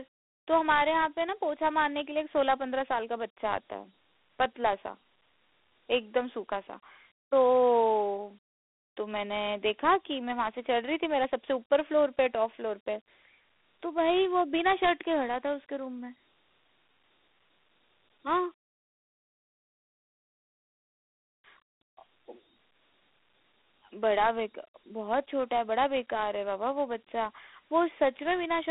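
A gritty hiss rides along with the speech from start to finish, and the sound is boxed into a narrow band of roughly 250 Hz to 3.6 kHz, with nothing above 3.8 kHz. This is Dialogic VOX ADPCM coding, consistent with 4-bit samples at 8,000 per second, about 32 kbps, whose coarse step tracking leaves plainly audible grain.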